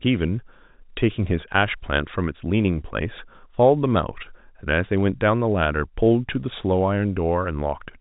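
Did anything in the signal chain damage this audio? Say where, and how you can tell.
No, the chain shows no damage; the speech carries the normal signature of G.711 mu-law telephone coding at 64 kbps, with nothing above 4 kHz and only the faint level-following quantisation hiss that format always leaves.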